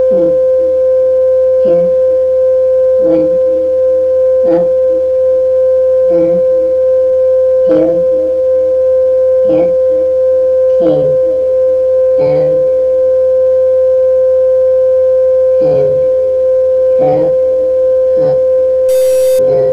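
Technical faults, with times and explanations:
18.89–19.39 s, stuck bit: one data bit likely jammed at a fixed value, shifting about half the samples by a step near -25 dBFS, causing harsh, buzzy distortion.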